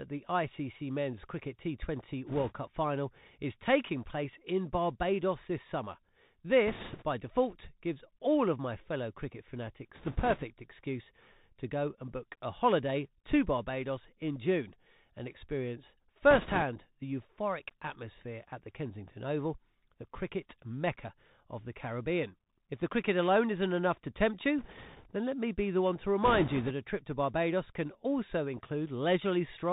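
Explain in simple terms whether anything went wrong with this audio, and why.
The whole clip went through a Bluetooth CVSD headset codec, so the speech sounds thin and phone-like, with scratchy s sounds and a grainy hiss underneath. There are also bit errors on a Bluetooth voice link: brief rushing, crackly noise at 2.27–2.53, 6.67–7.04, 9.95–10.43, 16.31–16.63 (after "and experience"), 24.59–25.08 and 26.23–26.72 s.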